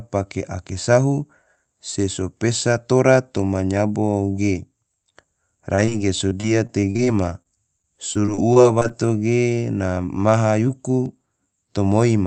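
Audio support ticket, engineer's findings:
Short concealed packet loss, 5.75 s, 5.85 s, 5.89 s. Three brief smears, roughly 20 ms of audio missing at each. Jitter buffer/decoder concealment: the receiver extends the preceding sound, pitched or noise-shaped, then crossfades back into real audio. The last two holes sit back to back, giving a slightly longer wobble near 5.9 s. A consonant there may drop out.

Repeated packet loss (robotic sound), 6.29–8.92 s. Choppy texture with pieces of speech missing. Eighteen separate holes in under 3 s, longest 43 ms, about 13% of the stretch synthesized by concealment. Each patch extrapolates the last sound before the next loss arrives, so the repeated extensions stack into choppy sound. The network path is the probable source. Sound is band-limited at 8 kHz, which points to an Opus call codec at around 32 kbps.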